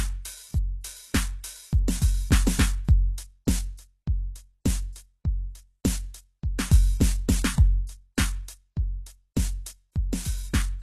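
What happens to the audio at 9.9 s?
At 9.9 s, as across the whole music clip, the treble carries the gritty, metallic sheen of HE-AAC compression, likely at a very low bitrate around 16 kbps. The codec spends its bits on the lower spectrum and then fabricates the upper bands by copying lower material upward under a coarse envelope. The result is brightness whose harmonics don't line up with the music below, so cymbals and sibilant edges sound gritty and metallic, with nothing above 12.3 kHz.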